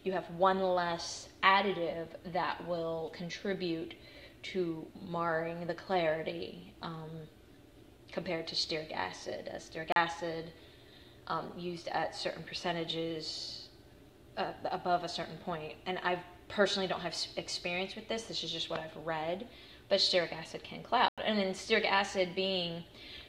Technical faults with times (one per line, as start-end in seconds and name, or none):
9.92-9.96 block of digital silence
11.49 block of digital silence
21.08-21.18 block of digital silence